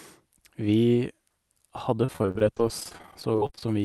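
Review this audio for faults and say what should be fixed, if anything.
Repeated packet loss, heard as robotic sound, runs from 1.96 to 3.63 s. Dozens of short holes, each up to 31 ms, are patched by extending the previous sound. About a quarter of that stretch is filled in. Enabling forward error correction and a steadier network path with more jitter buffering would prevent it.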